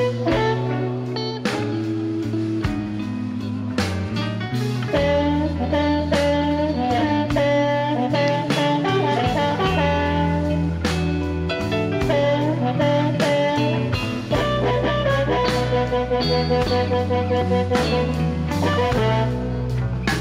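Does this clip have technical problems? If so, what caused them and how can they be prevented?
No, there are no technical faults to report in this recording, so nothing needs tracing to a cause or preventing.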